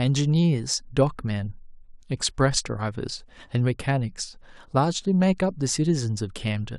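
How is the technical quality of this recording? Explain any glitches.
No technical faults are audible.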